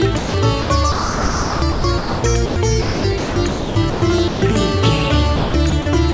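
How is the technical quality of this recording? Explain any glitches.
The recording is marred by repeated gaps and choppy stretches where the sound is swapped for steady synthetic hiss. The call path carries nothing above 8 kHz, consistent with a G.722 link.

Sound dropped by the voice detector occurs at 0.18 to 0.34 s, 4.28 to 4.42 s and 6.12 to 6.14 s. In each, the sound vanishes for about 140 to 160 ms (21 ms at the very end), replaced by flat comfort noise. The likely cause is the sender's voice detector misjudging quiet material as background and pausing transmission.

Sound chopped by the voice detector affects 0.62 to 2.56 s, 2.82 to 4.02 s and 5.36 to 5.86 s. Here the audio stutters, with about 1.26 s, 0.8 s and 0.24 s respectively filled by comfort noise. This is likely the detector toggling on and off repeatedly, clipping softer passages and edges.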